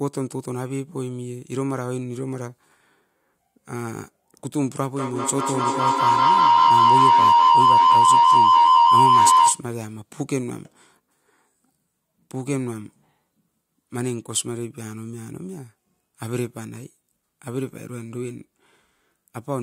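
From 4.97 s to 9.69 s the speech is overtaken by feedback howl. Sound from a loudspeaker re-enters a microphone on the same call and comes back louder on each pass, so the repeats grow instead of dying away and narrow onto the frequency the loop favours, here around 1 kHz. The tone pulses roughly every fifth of a second, matching the loop delay, and peaks about 11 dB above the speech before it stops.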